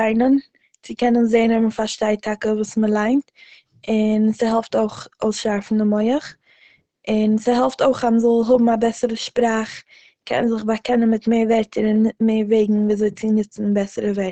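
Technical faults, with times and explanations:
Throughout, Opus compression: the speech sounds muffled and hoarse, with plainly audible codec damage and nothing above 8.8 kHz. This is likely Opus running in its SILK speech mode at wideband, where the encoder models the voice in a narrowed band and discards the top octave, which fits a low rate near 16 kbps. A spectrogram shows a flat ceiling at 8.8 kHz with empty space above; the waveform looks ordinary.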